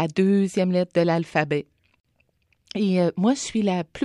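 At 2.0 s a 45 ms gap at a join of encoded pieces opens in the speech. It's encoder padding left untrimmed. Unlike a dropout, the sound resumes exactly where it stopped.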